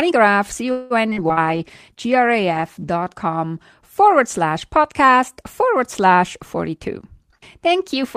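From 0.71 to 1.40 s the speech breaks up with repeated packet loss (robotic sound). Four gaps open in quick succession, the longest 189 ms. Each is patched by stretching the last received sound, so 238 ms is filled with synthetic continuation and 120 ms is simply missing, about 35% of the stretch concealed. The result is choppy, with pieces missing. A spectrogram shows smeared, flat harmonic bands where formant movement should be, with the waveform envelope repeating or fading out at each hole.

Inside that stretch, at 1.15 to 1.20 s, there is a skip ahead. Roughly 70 ms of audio that was already queued is discarded to shorten the delay, and only 14 ms of fill joins the two sides. Playback jumps forward with almost no gap. In the waveform, two unrelated segments butt together at a hard seam. On the spectrogram, formant tracks jump abruptly at that point instead of gliding.

From 1.43 to 3.05 s, just before "com forward slash podcast", a jitter buffer slow-down stretches the audio to 92% speed at unchanged pitch, adding 142 ms as the receiver rebuilds its reserve by repeating pitch periods and bits of pauses. 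Vowels sound drawn out. The waveform shows runs of near-identical pitch cycles, and the spectrogram shows harmonics held level for longer than natural.

Overlapping this, from 1.46 to 3.17 s, a call bitrate drop takes the encoder from 32 kbps to 18 kbps, staying at the lowest rate for 1.5 s after a fall in the bandwidth estimate. The coarser coding makes the sound rough and watery. The spectrogram shows the upper band thinning or cut off, and blurry, blotchy texture where fine harmonic detail used to be.

From 6.69 to 8.15 s, right after "slash podcast forward slash", a jitter buffer speed-up runs at 107%, removing about 100 ms in small pieces of one or a few pitch periods to drain excess delay. The pitch stays the same but the delivery feels hurried. In the waveform, pitch cycles are missing at intervals with small splice points. On the spectrogram, syllables and pauses are shortened without any shift in the harmonics.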